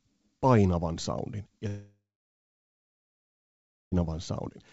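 From 1.68 s to 3.94 s the speech stops and a fading buzz continues the last sound for a few tenths of a second, then silence for about 1.9 s. This is likely a long network dropout: about 2.24 s never arrived, and the speech resumes past the gap. On a spectrogram, a smeared tail gives way to a blank band before speech returns; the waveform shows a brief decaying stretch, then a flat line. Throughout the clip, nothing appears above 8 kHz, which fits a wideband call codec.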